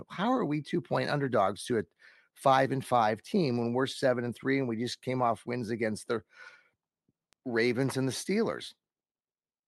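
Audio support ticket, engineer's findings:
Bit error spike at 7.33 s in speech. Sharp tick, about -37 dBFS, three samples wide. Waveform: isolated needle, value jumps by a power of two, then returns. Spectrogram: thin full-band vertical line. Probable component: memory or digital link.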